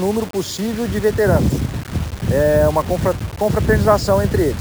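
The whole clip carries a grainy, gritty distortion that rides along with the sound. It roughens the quieter stretches most, with the faintest moments sputtering or dropping out. That's the signature of low bit depth without dither: it's likely been rounded to very few levels, which fits something like 5 bits, with the error sitting only about 20 dB below the signal.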